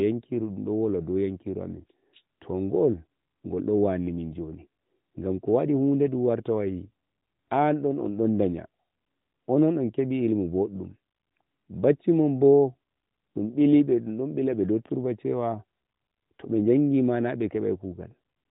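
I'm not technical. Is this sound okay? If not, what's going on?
Yes, nothing here sounds wrong or broken.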